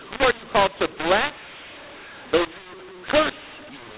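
A mixup between mu-law and A-law runs through the whole clip. The speech was coded with A-law but decoded as mu-law, so every 8-bit code maps to the wrong point on the companding curve. Loud and soft samples land at scrambled levels, which makes the speech harsh and gritty. The quietest samples are pushed well above silence, so pauses fill with noise. The underlying telephone band, cut off near 4 kHz as expected for 8 kHz G.711 coding, is still audible beneath the damage.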